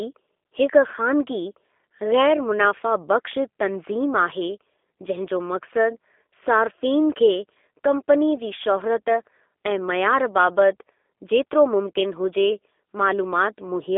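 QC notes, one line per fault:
throughout, G.729 codec: the speech is intelligible but thin, slightly rough and synthetic, with nothing above about 3.6 kHz and only the 300 Hz to 3.5 kHz telephone band passed. The codec discards the waveform and rebuilds each 10 ms frame from a vocal tract filter, a pitch predictor and a few sparse pulses, so fine detail turns buzzy and grainy. This plainly audible damage fits a low-rate 8 kbit/s G.729A voice link.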